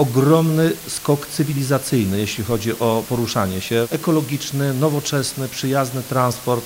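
From start to finish the audio carries low bit depth with dither: it has been reduced to 6 bits, with dither added before rounding so the rounding error becomes a constant, even hiss about 15 dB below the signal, without distortion. A spectrogram shows a flat noise floor across all frequencies, and the waveform never falls to silence.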